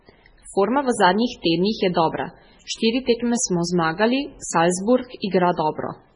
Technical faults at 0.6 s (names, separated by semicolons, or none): MP3 compression